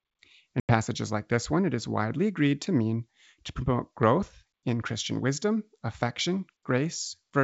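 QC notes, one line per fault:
0.60–0.70 s, packet loss on an ADPCM call: about 90 ms of the speech drops out into a sharp-edged silent gap, the sort of hole you'd expect from around ten packets going missing in a row. Because ADPCM keeps its predictor and step size running from sample to sample, the receiver loses track of the sender during the gap, so the speech comes back slightly distorted before it settles over the next few tens of milliseconds. The underlying G.722 wideband coding sounds clean, in line with the full 64 kbit/s mode.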